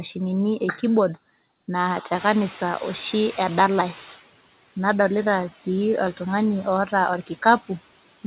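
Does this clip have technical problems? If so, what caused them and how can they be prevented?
Yes. A noise suppressor runs throughout, cutting what it judges steady noise by about 17 dB frame by frame, so the room noise dips between words and swells beneath them. Gentler suppression settings would prevent this.

The room noise jumps by about 22 dB at roughly 2 s, and from 2.13 to 4.22 s the noise suppressor is catching up: its estimate lags, letting the louder noise through before it sinks by about 12 dB over 2.09 s. Faster noise-estimate adaptation would prevent this.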